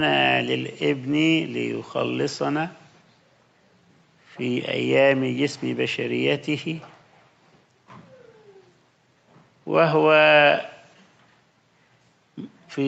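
No faults are audible: the sound bears the ordinary marks of a call chain, with the microphone high-pass trimming the deepest bass and the Opus link at 64 kbps capping the band at 8 kHz, both expected behaviour for this path.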